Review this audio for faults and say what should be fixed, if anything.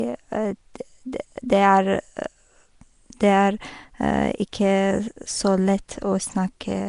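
Throughout, the speech carries a rough, hissy halo and a smeared, underwater quality. Nothing reaches above 10.6 kHz. The likely cause is Nellymoser compression at a bitrate around 44 kbps. It spends a fixed bit budget per short block, so weak bands get noise instead of signal. To prevent it, capture or export with a modern codec at an adequate bitrate rather than Nellymoser.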